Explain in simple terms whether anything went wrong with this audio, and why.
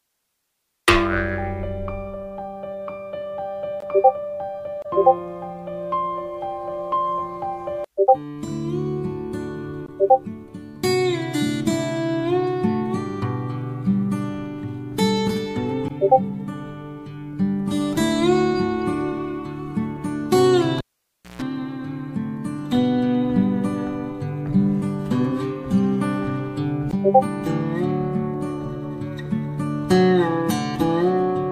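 At 20.78 s a pop cuts the sound to near silence for about 0.6 s, then a brief 60 Hz mains buzz and another pop at 21.42 s: a cable pulled and plugged in.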